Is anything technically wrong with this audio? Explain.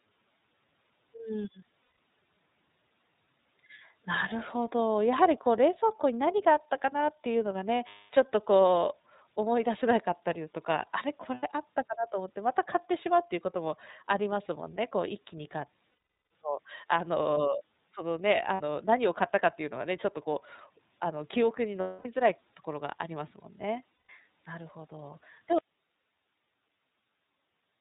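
Yes, there are three kinds of technical fault.

The iLBC codec affects the whole clip. This narrowband codec discards everything above 4 kHz and codes each frame independently. The speech is clear but audibly rough and synthetic, which fits the 13.33 kbps mode with 30 ms frames.

Lost iLBC frames occur at 1.83 s (150 ms), 7.88 s (240 ms), 11.34 s (90 ms), 15.9 s (420 ms), 18.54 s (60 ms), 21.8 s (240 ms) and 23.94 s (150 ms). During each gap the decoder repeats the last pitch cycle blended with noise, so it sounds like a held, buzzy vowel. The longest gap at 15.9 s fades as it goes on. Because the frames stand alone, the speech recovers immediately afterwards.

An audio dropout to a faint residue starts at 25.58 s and lasts to the end. The signal cuts off abruptly, leaving only hiss about 45 dB below the speech level. The cause is likely a break upstream while the later stages of the path stayed live.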